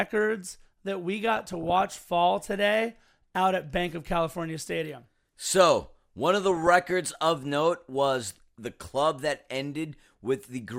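DAB burbling at 1.36 to 2.02 s and 6.51 to 7.11 s: bit errors slip past error correction, making sub-bands jump in level frame by frame, so the speech burbles with short blips of noise, heavier in the first burst.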